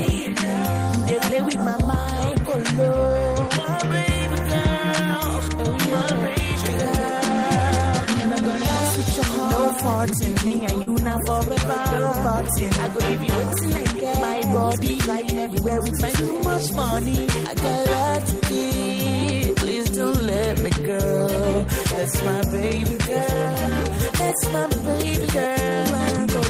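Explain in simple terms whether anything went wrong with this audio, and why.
Two brief glitches sit close together just past the ten-second mark.

From 10.47 to 10.54 s there is a short stall from a late packet. A piece of audio arrived too late, so the receiver held the last sound for about 32 ms until it came. Nothing is lost, but that moment drags slightly, and everything after it plays 32 ms later.

From 10.83 to 10.90 s there is a short concealed packet loss. About 40 ms of audio never arrived, so the receiver filled the gap by extending the last sound. The result is a quick smear or wobble where real audio is missing.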